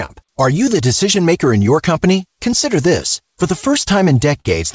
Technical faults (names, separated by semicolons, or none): clock drift between sender and receiver; short stall from a late packet; repeated timing corrections